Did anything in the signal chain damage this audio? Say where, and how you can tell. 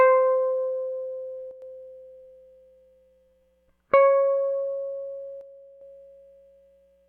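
Yes. The music suffers one channel dropping out, twice. From 1.51 to 1.62 s, and again from 5.41 to 5.81 s, the level falls abruptly by about 6 dB and then snaps back. A drop of that size is what a mono sum gives when one side goes silent: the shared material halves in level, and anything carried only by the lost side vanishes. The likely culprit is the analogue wiring, such as an intermittent cable or connector on one leg.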